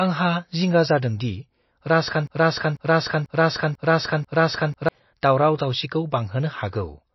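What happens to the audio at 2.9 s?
At 2.9 s the sound is caught in a broken-record loop running from 2.27 to 4.89 s: a fragment of about 0.49 s plays five times back to back, likely because the stream stalled and kept resending its last buffer. Each repeat is identical, unlike an echo, which decays, or a stutter, whose pieces are shorter and irregular. The audio that should have filled that span is lost.

Over this, and across the whole clip, MP3 compression is plainly audible. Nothing sounds above 5.8 kHz, a fixed treble cut, and weak frequency lines flicker on and off, giving a watery, swirly texture with smeared attacks, likely from a starved bitrate near 27 kbps. Unlike a simple low-pass filter, the cut comes with this shifting, metallic swirl.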